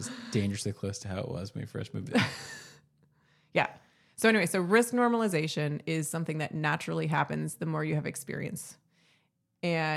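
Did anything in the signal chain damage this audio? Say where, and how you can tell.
No, nothing in the signal chain damaged this audio.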